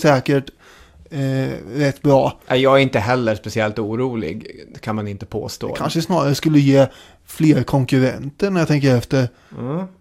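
At 5.47 to 5.56 s and again at 9.02 to 9.07 s the speech is overlaid with DAB burbling. Weak reception lets bit errors slip past error correction into the MP2 audio stream, a few tenths of a percent at most, so corrupted samples put short blips of noise in individual sub-bands and wrong scale factors make sub-bands leap in level for up to a frame. Each burst suggests several damaged frames and is heard as brief burbling over the speech.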